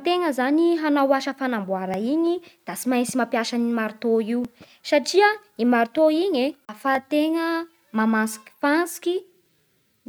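At 1.94, 4.45, 6.95 and 9.46 s you get a little tick in the speech, and that steady 2.5-second spacing is the giveaway for overlapping chunks. Each new block of audio starts about 7 ms before the previous one finished, so that sliver gets played twice at every join. It's too short to hear as an echo. It comes across as a small click or hiccup, landing on a regular beat.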